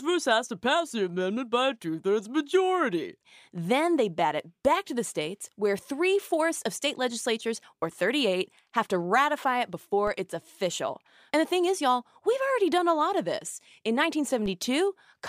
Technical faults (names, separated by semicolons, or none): DC step